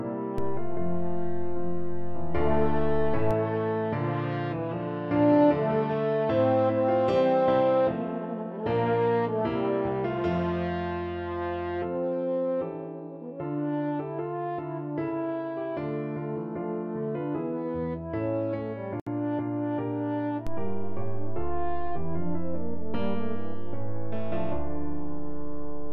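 At 0.38 s there's a DC step: the waveform's zero line suddenly jumps to an offset, the kind of thing you get when a converter recalibrates or an input carrying an offset gets switched in. You hear it as a low thump, and the sound itself carries on untouched. The offset lasts until 3.31 s.

Then from 19.00 to 19.07 s there's a gap at a join of encoded pieces, a gap of about 67.5 ms cut into otherwise continuous sound. The audio was encoded in separate chunks and joined without trimming, so the encoder's start-up delay and the padding on the last frame both stayed in. The codec smears the edges, so the truly silent part is shorter, and the sound picks up exactly where it left off.

At 20.47 s a second DC step arrives with the same low thump, and this time the offset stays put right through to the end of the clip.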